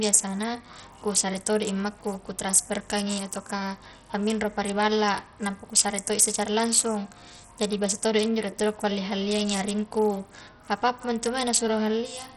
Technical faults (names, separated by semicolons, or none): Bluetooth SBC compression